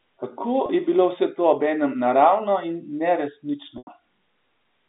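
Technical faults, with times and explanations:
0.66–0.69 s and 3.78–3.87 s, packet loss with pitch repetition: audio drops out for 30 ms, fitting one lost packet, then 90 ms, fitting three. Each gap is patched by repeating the last pitch period: the first as a briefly held, buzzy tone, the second fading to silence before a quick cross-fade back. A spectrogram shows harmonics frozen flat, under the 3.7 kHz telephone band edge; the waveform shows identical cycles repeating and shrinking.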